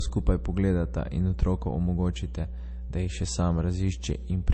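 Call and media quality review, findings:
Mains hum: steady low 60 Hz drone with low harmonics under the speech, start to finish, roughly 10 dB below it, so clearly audible. Probable component: capture chain grounding or a nearby transformer. Power-line field coupling into the signal path, most likely through a ground loop.

Low-bitrate audio saved at a high bitrate: dull, band-limited speech with nothing above 8.3 kHz and first-pass MP3 artefacts throughout. Likely cause: a low-bitrate MP3, fitting about 32 kbit/s, re-encoded at a high rate. The second pass cannot restore the discarded content.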